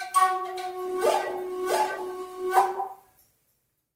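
From 0.86 s to the end, a call bitrate drop degrades the sound: the encoder falls from 48 to 15 kbps, at its lowest for about 1.4 s, coding more coarsely and cutting highs. Unlike packet loss, nothing drops out, and it never recovers.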